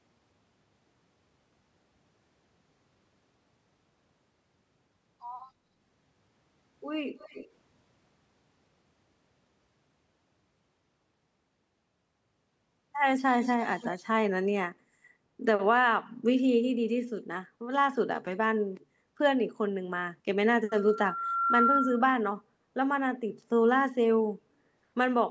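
Speech recorded over a call, with its content band-limited to 8 kHz by the call's microphone processing, carries three distinct faults. From 7.18 to 7.5 s and again from 13.33 to 13.98 s, a delayed copy of the speech trails the original by about 267 ms, at about 20 dB below the speech the first time and about 10 dB below the second. This is likely an echo leak: a loudspeaker on the far side was picked up by its microphone and not fully cancelled. The fixed delay and the copy's lower level mark it as a returned echo rather than room reverberation, which would smear continuously instead of repeating at one lag. Between 18.83 and 19.18 s the background sound dips by about 9 dB for roughly 0.4 s and then recovers. This is background gated by the echo canceller, which turned the microphone down hard while it judged the loudspeaker active. It differs from a network dropout because the room tone is lowered rather than cut to silence, and it comes back when the canceller lets go. 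From 20.69 to 22.13 s a loudspeaker feedback squeal appears as a single 1.4 kHz tone that builds over about a second to roughly 5 dB above the signal. A microphone was hearing the loudspeaker it feeds, and the loop gain at that frequency exceeded one. A steady pure tone that swells in this way sets it apart from echo, which repeats the speech, and from broadband hiss or hum.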